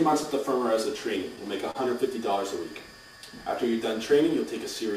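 Clock drift between sender and receiver runs through the whole clip: the sender's audio clock is roughly three percent slow, so the receiver's jitter buffer keeps drifting toward empty and the audio cannot stay in step without constant adjustment, heard as faint, uneven timing wobble.

From 0.59 s to 4.93 s the receiver makes repeated timing corrections, repeatedly stretching short pieces to cover the missing material. Playback runs at about 98% speed and adds around 70 ms in total, heard as slight hiccups and a subtly unsteady tempo.

At 1.71 to 1.77 s a short stall from a late packet occurs: the buffer ran dry, so the receiver held the last sound for 37 ms until the packet arrived. Nothing is lost, but that moment lingers briefly with a slight buzz or dip.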